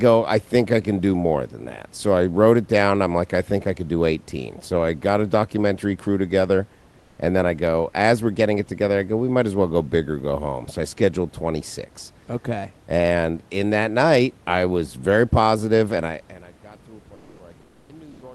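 Near the end, the sender likely stopped transmitting during pauses, as Opus discontinuous transmission does, and the receiver filled the gaps with synthetic comfort noise in place of the background. The real room noise gives way to a flat, featureless hiss three times: 17.15 to 17.39 s, 17.61 to 17.89 s and 18.11 to 18.21 s. The fill is about 1 dB, about 7 dB and about 2 dB quieter respectively, so the middle gap drops the most.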